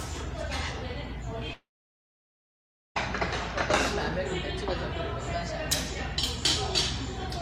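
From 1.53 to 2.97 s there's a long network dropout, likely: the sound smears into a brief fading buzz, then about 1.3 s of silence before it resumes.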